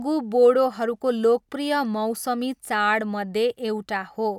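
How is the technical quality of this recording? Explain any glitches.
No glitches or dropouts heard.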